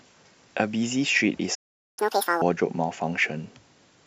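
A speech clip in which the sound cuts out at 1.54 s and stays silent for about 0.43 s, to 1.99 s, before resuming where it left off. This is a playback stall, likely the player running short of data or having its output thread held up, so nothing reached the output until it recovered. The voice then returns noticeably rushed and raised in pitch, by around ten semitones, until 2.42 s, when it settles back to its normal rate and register. That stretch is catch-up at higher speed: having fallen behind during the gap, the player resamples its backlog and plays it at twice normal speed, which raises the pitch along with the tempo. At double speed the roughly 0.43 s burst recovers about the same amount of lost time, after which playback drops back to normal.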